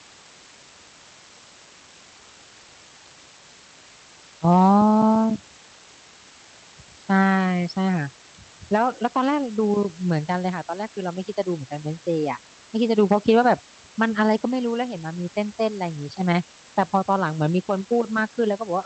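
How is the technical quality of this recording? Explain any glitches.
The recording carries a constant hiss all the way through, and that's really the one problem to flag. It comes from low bit depth with dither: the audio sounds as if it's been squeezed down to something like 6 bits, with dither added before rounding, so the quantisation error turns into steady white noise rather than gritty distortion. You hear an even, unchanging hiss roughly 20 dB under the speech, present from start to finish, sitting on top of a call-codec path whose audio band tops out around 8 kHz.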